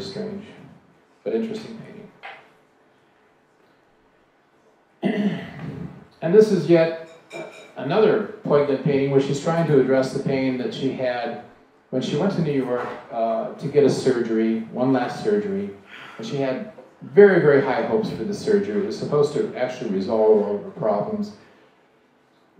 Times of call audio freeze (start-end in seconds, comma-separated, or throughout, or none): none